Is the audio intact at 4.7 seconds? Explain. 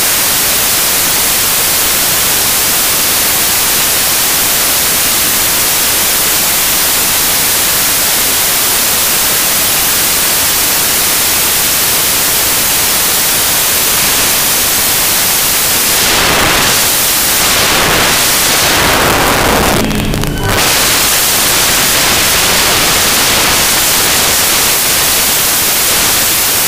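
No. At 4.7 s, as throughout, samples built from the wrong bytes turn low bits into loud, harsh broadband noise: a full spectrogram wash.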